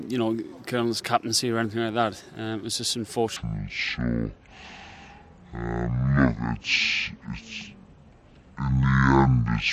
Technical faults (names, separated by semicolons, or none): section at the wrong speed